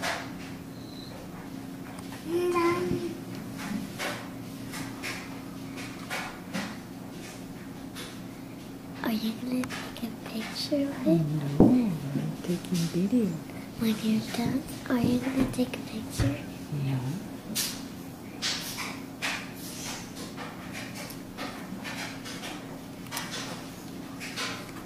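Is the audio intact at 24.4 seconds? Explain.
Yes, the audio is intact at 24.4 seconds, with no dropout, click, distortion or other fault at that point.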